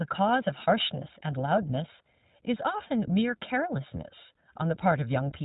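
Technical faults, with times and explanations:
Throughout: channel delay (comb filtering). One channel runs roughly 1.5 ms behind the other, and when the two are summed to mono the shared signal cancels at evenly spaced frequencies, the first near 400 Hz. Fixed notches leave the speech hollow and phasey.
Throughout: iLBC codec. The speech passes through the narrowband iLBC VoIP codec, which fits a 15.2 kbps mode with 20 ms frames, each coded on its own. Nothing above 4 kHz survives, and the coding damage is plainly audible as a rough, synthetic edge on the voice.
3.20 s: lost iLBC frames. A 20 ms stretch, which points to a single lost packet, was filled by the decoder repeating the last pitch cycle mixed with noise. The gap sounds like a brief held, slightly buzzy vowel, and the voice recovers almost at once.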